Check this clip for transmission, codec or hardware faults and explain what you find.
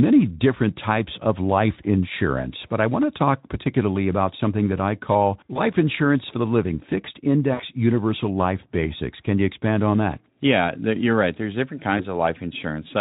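Three short dropouts point to VoIP packet loss concealed by the speech codec. They fall at 5.54 to 5.60 s, between "something that I call" and "insurance for the living". Then 7.53 to 7.63 s, between "for the living fixed" and "universal life basics". Then 11.97 to 12.04 s. About 20 ms of audio goes missing in the first and last, and 60 ms in the middle, which fits one and three lost frames. The decoder fills each gap by repeating its last pitch and spectral shape at falling gain. So the speech smears into a buzzy tone or coloured noise that fades. The voice stays weak or distorted for tens of milliseconds or more after each gap while the decoder recovers. The underlying Speex coding adds only a light noisy edge.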